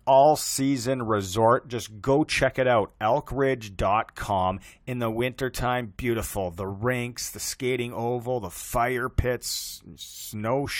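Right at 9.18 s there's a quick blip from damaged data in the compressed stream: the decoder misread a corrupted frame and briefly lost sync.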